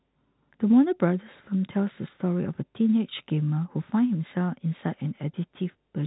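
No technical fault can be heard in the speech, which carries the narrow band of G.711 telephone coding with nothing above 3.8 kHz.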